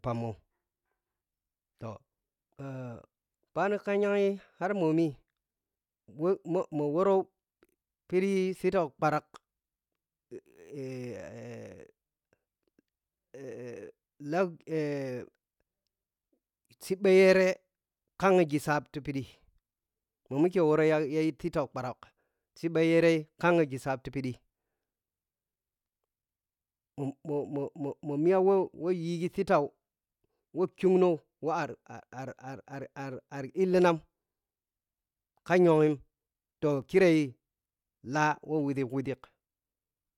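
At 36.82 s, a block of digital silence replaces about 3.4 ms of the speech with zeros. The unfaded cut produces a brief click or tick.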